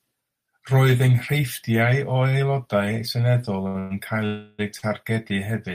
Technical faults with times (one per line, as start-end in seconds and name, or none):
3.67-3.77 short stall from a late packet
3.79-3.92 call audio freeze
4.26-4.61 call audio freeze
4.79-4.84 short stall from a late packet